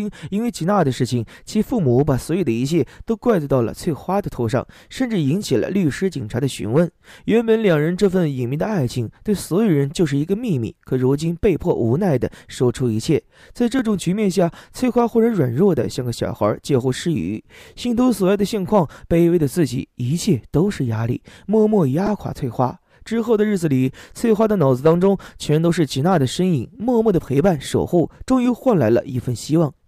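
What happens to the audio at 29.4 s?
Nothing goes wrong at 29.4 s; the audio plays through that moment intact.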